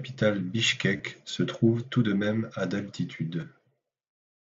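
A speech recording with two brief buzzy, held patches, at 0.97 to 1.00 s and again at 3.41 s, each ending in a slight warble as the real sound resumes. This is concealed Bluetooth headset packet loss. Headset packets went missing, which fits about three frames (22.5 ms) and two frames (15 ms), and the receiver filled each gap by repeating the best-matching recent stretch of the waveform. The audio comes through the wideband mSBC headset codec.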